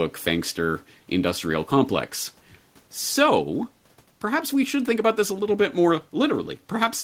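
No technical faults are audible anywhere in this recording.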